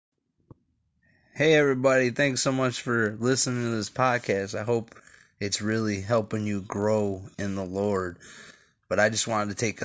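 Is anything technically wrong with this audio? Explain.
Yes. From 3.06 s, just after "so much", to the end, a 50 Hz buzz rides on the speech: the resampler restarted on every 20 ms block, leaving a small error at each edge.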